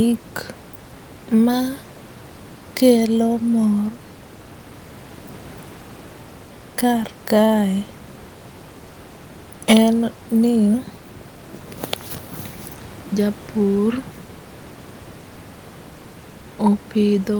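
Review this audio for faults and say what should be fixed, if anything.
Nothing here needs fixing: the speech comes through without any faults, and the room noise behind it sits about 19 dB below the speech, which is just part of the recording space.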